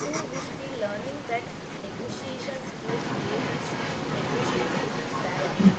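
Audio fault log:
Throughout: echo leak. The far end likely plays the call over a loudspeaker, and its echo canceller let part of what its microphone picked up pass back into the call. A delayed second copy of the speech trails the original by about 196 ms for the whole clip. It sits roughly 5 dB above the direct speech, so the repeat is louder than the original. The voice is heard twice, giving a doubled sound.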